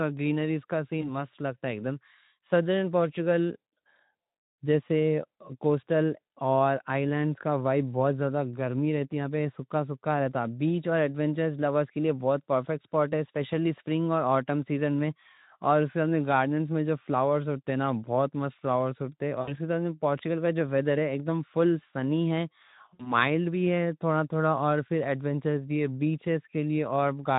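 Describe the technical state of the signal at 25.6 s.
At 25.6 s the speech comes through intact, with no fault at that point.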